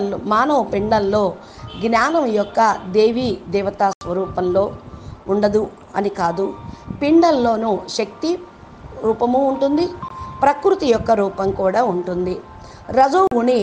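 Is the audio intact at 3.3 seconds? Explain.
Yes, the audio is intact at 3.3 seconds, with no dropout, click, distortion or other fault at that point.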